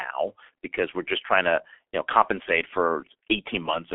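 The speech sounds muffled and hoarse from start to finish, with consonants smeared and no brightness above the telephone band, roughly 300 Hz to 3.4 kHz. That is heavy G.723.1 codec damage: a 6.3 kbit/s low-rate coder working in coarse 30 ms frames.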